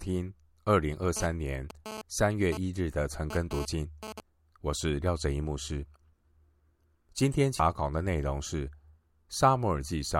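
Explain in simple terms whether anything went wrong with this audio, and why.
From 1.17 to 4.20 s there's a GSM phone buzz, a harsh, raspy drone at about 217 Hz. A nearby 2G phone was sending data in short radio bursts, and the audio circuitry turned those bursts into sound, so the buzz comes and goes.

At 7.60 s there's a brief glitch from damaged data in a compressed stream. Part of the file was corrupted, so the decoder couldn't read that spot, lost its place, and skipped ahead to the next point it could recognise.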